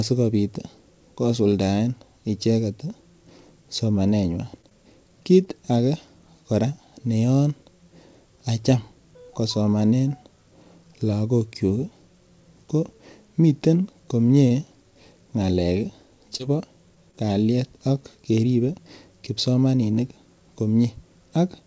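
From about 4.18 to 4.73 s, just before "kiit age kora ne", there's a stutter from repeated stalls. The jitter buffer ran dry four times, with the longest gap about 18 ms, and the receiver stretched the last sound to cover them. Nothing's actually lost, but that stretch drags and judders.

At 14.48 to 14.53 s there's a short stall from a late packet. The delay jumped about 25 ms and the sound got held that long until the packet turned up. You hear it as a brief hang, maybe a slight buzzy dip, and no audio is missing.

Then come three short concealed packet losses, at 16.38 to 16.41 s, 16.95 to 16.99 s and 17.11 to 17.15 s. The last two land right before "kalyet ak". About 20 ms went missing each time, and the receiver papered over it by continuing the previous sound. Each one comes across as a quick smear or wobble.

All of this rides on a call path with nothing above 8 kHz, which fits a wideband codec like G.722 at 64 kbps.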